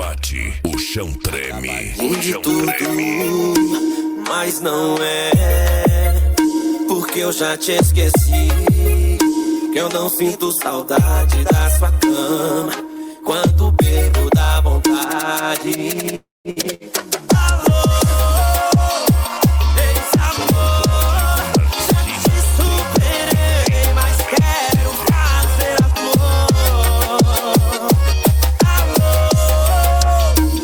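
At 16.15 s the sound breaks off for about a third of a second, until 16.48 s. The last sound is carried on as a fading buzz or hiss. About 170 ms of near-silence follows before the audio returns. Roughly 300 ms of material is gone, not delayed. This is most likely a long network dropout: nothing arrived, so the receiver stretched what it had, then gave up.

Two shorter breaks follow closely. The first runs from 16.51 to 16.59 s, the second from 16.74 to 16.83 s. Each is a burst of packet loss removing about 60 ms. The receiver fills about 55 ms of each gap with a held, fading copy of the preceding sound. The audio then picks up further along, with the lost piece skipped.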